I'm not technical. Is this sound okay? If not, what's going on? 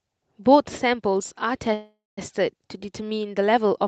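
No. A call audio freeze runs from 1.73 to 2.19 s: the speech stalls into a fading buzz, then near-silence, and resumes where it left off with nothing lost. The likely cause is delayed network packets leaving the playback buffer briefly empty.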